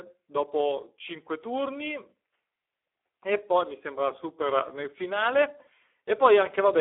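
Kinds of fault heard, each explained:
Speex codec: the old CELP speech codec of VoIP and game chat, at what sounds like a low setting of about 8 kbps, so the speech turns rough, hoarse and noisy. It's squeezed into a phone-like 300 Hz to 3.4 kHz band, with nothing above 3.8 kHz.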